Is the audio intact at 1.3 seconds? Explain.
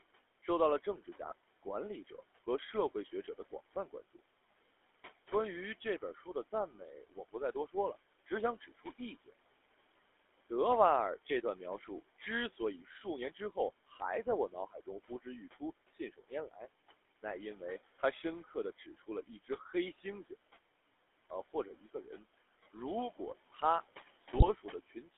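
No. From 1.24 to 1.32 s the sound breaks into a brief squawk and gargle. These are GSM bit errors: corrupted bits on a weak radio link reached the decoder and distorted the filter, pitch and gain values. The damage covers a span of roughly four codec frames.

That moment also falls inside a stretch from 0.44 to 4.2 s where speech was cut by the noise suppressor. Soft consonants and word endings sound swallowed, dipping by up to about 15 dB, roughly four tenths of a second in all. The suppressor mistook those quiet parts for background noise and turned them down with it.

Noise suppressor artifacts run through the whole clip. The background sinks between phrases and swells under them. The suppressor lowers bands it judges to be steady noise, frame by frame, by about 17 dB. The room noise, about 19 dB below the speech, is what gets pumped this way.

The GSM full-rate codec is also present throughout and is plainly audible. 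It gives the voice a buzzy, gravelly roughness, consistent with 13 kbps. A line band of 250 Hz to 3.5 kHz strips the highs and lows.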